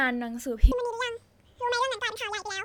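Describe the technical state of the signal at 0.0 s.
At 0.0 s the speech signal is intact, with no audible fault at that moment.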